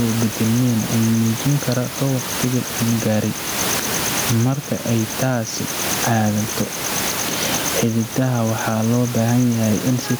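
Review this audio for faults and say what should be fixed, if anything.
Gain pumping runs through the whole speech clip: input gain was likely set far too high, so a fast limiter clamps down on every loud syllable. The room noise, about 13 dB below the speech, swells in each pause and ducks under each phrase, swinging by around 15 dB, and the speech sounds squashed and flattened in level. Lowering the input gain so peaks sit well below the limiter threshold would prevent this.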